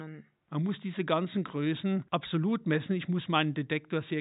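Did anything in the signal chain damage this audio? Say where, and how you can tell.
No, nothing in the signal chain stood out on listening, and the only background is the room's own noise, sitting about 53 dB below the speech.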